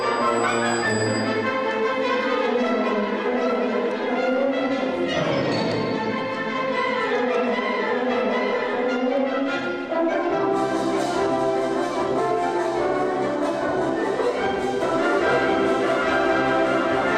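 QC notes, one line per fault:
14.82 s to end, doubled audio track: a second full-band copy, about equally loud, trails by roughly one second with an abrupt start, likely a slower duplicate capture path.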